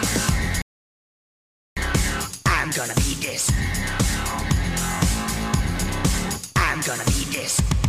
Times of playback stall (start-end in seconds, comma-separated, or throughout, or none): 0.62-1.77